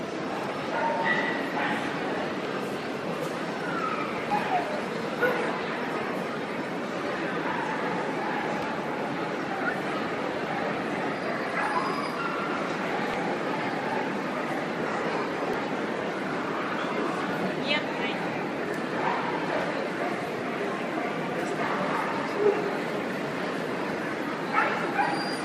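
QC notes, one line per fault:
2.45, 4.30, 8.62–8.66, 13.14–13.17, 15.54 s: damaged data in a compressed stream. Corrupted bytes make the decoder misread frames and lose sync, giving brief chirps, squawks, clicks or short holes.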